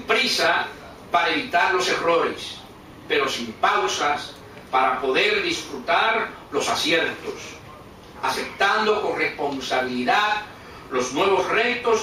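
No technical faults can be heard anywhere in this audio.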